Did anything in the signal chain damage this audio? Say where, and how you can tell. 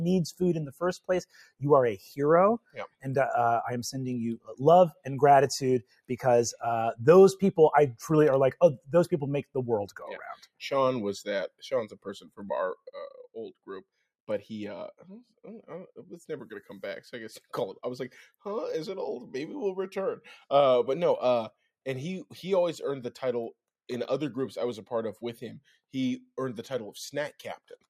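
Yes. The damage is in call processing: a noise suppressor applied to music or sounds stays active throughout. It treats steady content as noise, so level breathes by roughly 5 dB. Spectrograms show held partials and tails fading while onsets stay bright; the waveform envelope pumps.

Sound cut by the noise suppressor occurs at 1.26–1.62, 2.59–3.06, 4.38–4.57, 5.82–6.1, 11.89–12.41 and 13.11–13.36 s. Drops reach about 19–21 dB, and about 12 dB in the last one. These appear as dark vertical gaps on a spectrogram and pinched waveform sections where sustained sound was judged noise.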